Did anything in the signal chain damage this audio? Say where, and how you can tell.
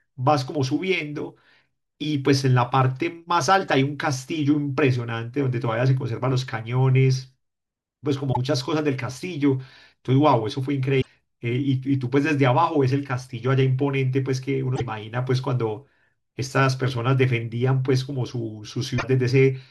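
Yes, at the codec stage: there's damaged data in the compressed stream. Five short blips cut through the speech, a very brief one at 3.68 s, then at 8.29–8.37 s, 10.98–11.07 s, 14.73–14.81 s and 18.95–19.04 s, each under a tenth of a second. Each time, some bytes in the encoded file were corrupt, so the decoder garbled those frames and lost sync until it found the next valid frame header.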